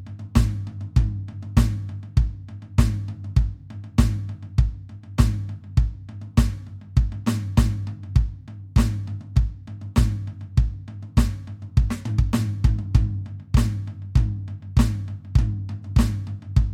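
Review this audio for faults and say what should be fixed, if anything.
Nothing stood out on listening to this music, so there is nothing here that needs fixing.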